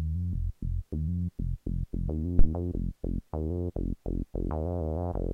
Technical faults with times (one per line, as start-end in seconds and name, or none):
2.39-2.47 phantom power thump